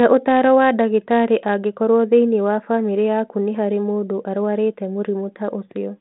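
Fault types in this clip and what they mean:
No faults present: the speech sits on a 32 kbit/s G.726 telephone path, band-limited to 150 Hz to 3.5 kHz with nothing above 3.9 kHz and only light coding grain, as expected for that channel.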